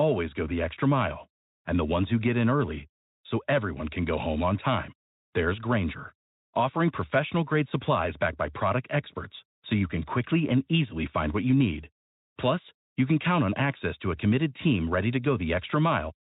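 Pre-emphasis left on from 0.97 s to the end: a 50 µs FM treble lift went uncorrected, raising 10 kHz by about 10 dB, so the speech turns thin, bright and sibilant.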